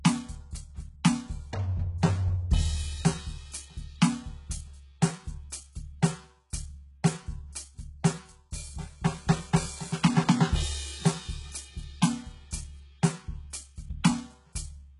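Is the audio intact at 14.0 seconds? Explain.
No. A pre-echo sits at 14.03 s: a short hiss about 10 ms long arrives just before a sharp attack, so the hit sounds softened and smeared at its front edge. A transform codec spreads its quantisation noise across an entire block, and because this attack lands late in its block, noise sized for the loud onset spills into the quiet instant ahead of it.

The moment also carries the damage present across the whole music clip, which points to HE-AAC compression, likely at a very low bitrate in the region of 12 kbps. Nothing is present above 11.1 kHz, and the treble that remains sounds synthetic. That fits spectral band replication, where lower bands are copied upward under a coarse envelope. Its harmonics don't align with the real ones across the crossover, so cymbal-like detail comes out gritty and metallic.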